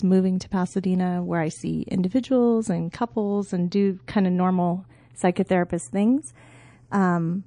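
From start to finish, the speech carries channels drifting apart. Two recordings on separate clocks, off by roughly 20 parts per million, were summed to mono. Their offset grows to a small fraction of a millisecond. The comb notches slide slowly, heard as slow flanging.

Also throughout, the sound has plainly audible MP3 compression damage, likely from a low bitrate near 40 kbps. Starved of bits, the encoder drops weak frequency lines frame by frame. The speech turns watery and swirly. S sounds chirp metallically, and onsets smear.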